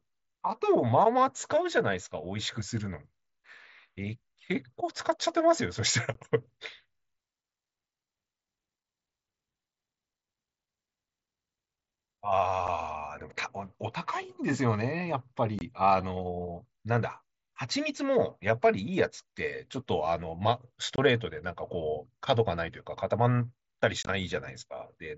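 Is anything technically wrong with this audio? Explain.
Yes, there's unconcealed Bluetooth headset packet loss on this speech, coming through the mSBC headset link with its 8 kHz ceiling and light grain. Short holes open at 6.14 s, 12.67 s, 15.59 to 15.61 s and 20.96 to 20.98 s, with gaps of 7.5 to 22.5 ms. At 24.03 to 24.09 s there's a rougher cluster, about 45 ms lost in total across 60 ms, with the longest gap 22.5 ms. The lengths fit whole 7.5 ms frames going missing between headset and phone. Nothing is patched over, so each dropout lands as a sudden little silence with hard edges, and the last cluster sounds choppy.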